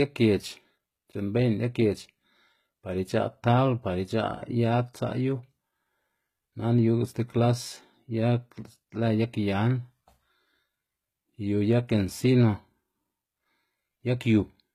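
The speech has likely been through HE-AAC compression at a low bitrate, around 20 kbps by the sound of it, where only the lower spectrum is truly coded and the top is regenerated by copying lower bands upward under a coarse envelope. Throughout the clip the damage is plainly audible: the treble sounds synthetic, s sounds come out gritty or lispy and metallic, and nothing is present above about 14.9 kHz.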